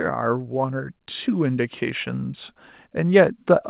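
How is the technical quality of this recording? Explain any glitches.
One glitch stands out, a slow level swell from automatic gain rising. The speech also carries nothing above 4 kHz, which fits a narrowband call codec such as G.711.

From 0.54 s to 2.41 s, the automatic gain control judged the input too quiet and kept raising its gain, by about 4 dB in total. The boost applies to the whole signal, so the speech and the background noise grow louder together over nearly two seconds.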